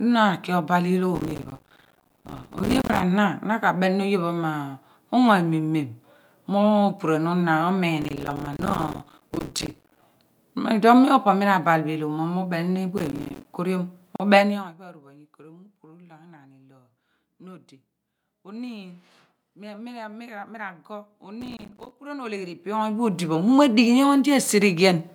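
Speech clip with four bursts of processor overload crackle, at 1.15–3.02 s, 8.02–10.02 s, 12.98–13.45 s and 21.41–21.91 s. The audio is repeatedly chopped by tiny dropouts of silence, which fits a buffer of around 5 ms missing its deadline again and again. On a waveform each burst looks like a comb of hard-edged notches; on a spectrogram it shows as dense vertical broadband streaks. There is also a gap at a join of encoded pieces, at 14.16–14.20 s: about 38 ms of silence where separately encoded segments were joined with their encoder delay and end padding left in. It appears as a clean blank column with slightly smeared edges, and the speech then resumes where it stopped.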